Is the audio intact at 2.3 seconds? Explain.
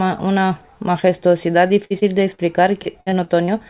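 No. At 2.3 s the audio is inside a stretch of repeated packet loss (robotic sound) running from 1.67 to 2.41 s. Four holes, the longest 58 ms, are patched by stretching the preceding sound, so about a fifth of the span is filled-in and choppy. A single dropout would leave one gap, but this one recurs quickly.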